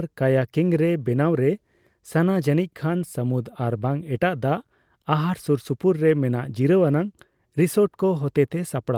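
Speech recording in which no technical fault can be heard at any point in the signal.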